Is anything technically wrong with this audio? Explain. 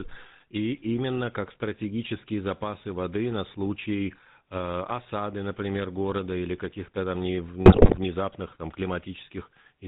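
Yes, there are two problems.

The whole clip has passed through the GSM full-rate codec, and the damage is plainly audible. The codec rebuilds speech from a vocal-tract model driven by a sparse, regularly spaced pulse train, keeping only a third of the excitation samples and cutting everything above 4 kHz. The result here is dull, band-limited speech with a buzzy, gravelly texture throughout, which fits the 13 kbps GSM rate.

From 7.66 to 7.99 s there are GSM bit errors. Corrupted bits reached the decoder, so the filter, pitch and gain parameters it rebuilt for that stretch were wrong. This warps the spectrum and makes the level jump from frame to frame. Over that third of a second the speech breaks into squawks, pops and gargling. The damage fits about 16 consecutive 20 ms frames being hit, with an error rate near 7 percent.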